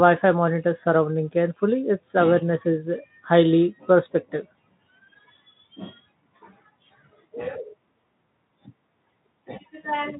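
Nothing faulty can be heard in this speech recording.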